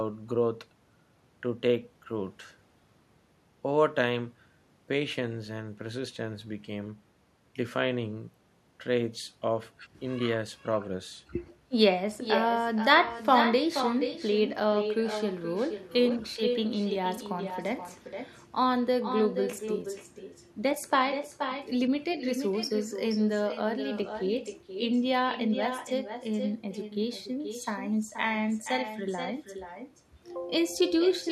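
From start to finish, the speech carries echo with no canceller: the far end's loudspeaker feeds its microphone and nothing removes it, so every phrase returns about half a second later, about 8 dB down and thinner than the original.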